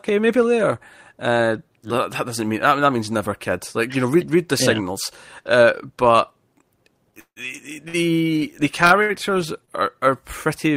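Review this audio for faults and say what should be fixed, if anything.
Packets were likely held up on the network so the jitter buffer ran empty, causing a call audio freeze from 7.20 to 7.39 s. The last sound carries on as a fading buzz with about 70 ms of silence, then the speech resumes 158 ms late with nothing lost.

Late packets then emptied the jitter buffer four more times, each a short stall from a late packet: 7.88 to 7.97 s (54 ms), 8.86 to 8.93 s (46 ms), 9.02 to 9.12 s (71 ms) and 9.65 to 9.71 s (25 ms). Each time a sound is stretched too long with a slight buzz before the speech continues from where it stopped.

To prevent both, reduce delay variation on the network path and give the jitter buffer enough adaptive headroom to absorb late packets before it runs empty.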